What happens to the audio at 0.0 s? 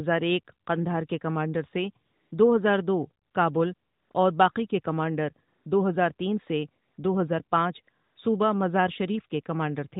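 At 0.0 s the audio is intact, with nothing going wrong at that moment beyond the narrowband band limit of the AMR narrowband mobile codec it passes through.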